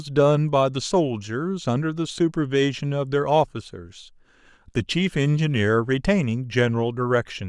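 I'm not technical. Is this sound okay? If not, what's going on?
Yes, nothing in this speech recording points to a technical problem with how the signal was captured or delivered.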